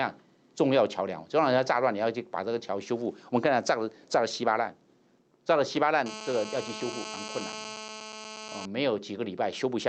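From start to finish, the level breathes by a few decibels, leaving loud and soft passages pressed close together and the whole clip squashed. This is gain pumping, and the likely cause is an input gain set far too high for the microphone, with a fast limiter or compressor clamping the level down on every peak and releasing it in between.

From 6.06 s to 8.66 s a hard, raspy buzz sits on top of everything, steady in level at about 12 dB below the signal and rich in harmonics above a 217 Hz fundamental, with no connection to what the audio is doing. That is GSM phone buzz: a 2G handset nearby, in an active call, transmitting its radio bursts 217 times a second, which the audio circuitry rectifies into this audible pulse train. The call path cuts the top end off above 8 kHz.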